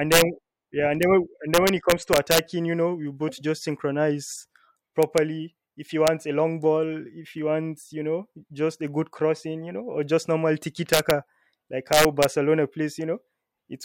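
Integer overflow cracks the speech at 0.12–0.22 s, 1.03 s after "yeah and", 1.54–2.39 s before "you know you both", 5.03–5.18 s after "you both just synchronize", 6.07 s, 10.93–11.11 s and 11.93–12.25 s. Loud peaks, up to about 5 dB over, wrap to the opposite sign instead of flattening, giving violent snaps far harsher than clipping's buzz.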